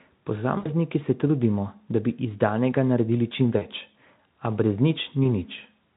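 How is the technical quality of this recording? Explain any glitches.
Three short glitches come from VoIP packet loss concealed by the speech codec, at 0.57–0.69 s just before "se trudimo da bi", at 3.57–3.64 s right after "iz danega naredili čim", and at 5.23–5.28 s. The Speex coding around them adds only faint colouring.

In each case, audio went missing (about 80, 40 and 20 ms). The decoder filled the hole by repeating its last pitch and filter at falling gain. That produces a brief buzzy, smeared tone that fades and recovers gradually, rather than the abrupt silence or click of a plain dropout.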